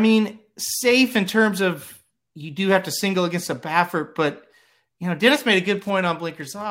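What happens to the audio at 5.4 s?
A faint, steady ticking, about ten ticks a second and well below the speech, runs from 5.20 s, just after "but you know", to the end at 6.70 s. This is Wi-Fi interference. A nearby Wi-Fi radio sends a beacon every 102.4 ms, and the audio circuit picks up and rectifies each burst of radio energy. Each burst becomes a small click, and the regular beacon spacing gives the ticking its even rhythm.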